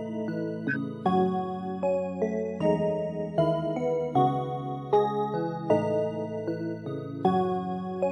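From 0.68 to 0.76 s a corrupt frame was decoded: damaged bits in about two compressed frames were played anyway, scattering energy to wrong frequencies. It sounds as a brief chirp, squeak, blip or noise burst, showing on a spectrogram as a misplaced patch of energy roughly 80 ms wide.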